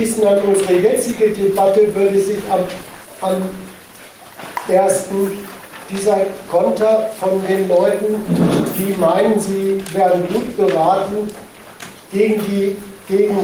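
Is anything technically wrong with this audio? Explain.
Yes. Gain pumping runs through the whole clip. The input gain is likely set well above what the microphone needs, so a fast limiter or compressor keeps clamping down whenever a loud sound arrives and lets go once it passes. The gain swings by roughly 5 dB. Loud and quiet passages sit closer together than they should, leaving the sound flattened and squashed.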